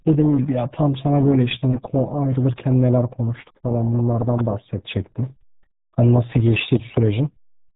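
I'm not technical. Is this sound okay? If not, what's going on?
No. The whole clip has been through the RealAudio 14.4 codec, an old dial-up speech format. Nothing above about 3.8 kHz survives, so the speech sounds muffled and gargly from start to finish.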